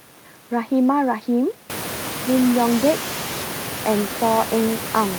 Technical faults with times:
none

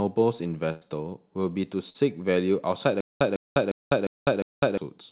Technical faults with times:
0.72-0.83 burst of packet loss
1.89-2.03 burst of packet loss
3.01-4.77 stutter with silent gaps

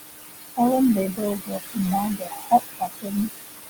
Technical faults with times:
0.00-3.70 noise suppressor artifacts
1.39-1.78 speech cut by the noise suppressor
2.16-3.13 speech cut by the noise suppressor

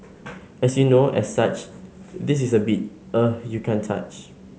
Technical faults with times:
none

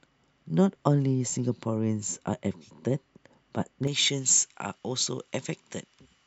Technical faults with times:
3.87-6.26 pre-emphasis left on

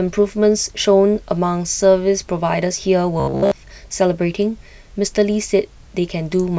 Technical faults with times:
3.20-3.52 robotic sound from repeated short buffers

